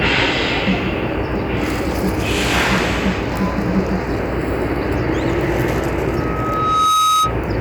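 A single piercing tone near 1.3 kHz swells over about a second from 6.07 s and rings until 7.36 s, ending up a little louder than the sound. This is loudspeaker feedback squeal: the microphone picked up its own loudspeaker, and the loop gain exceeded one at that frequency.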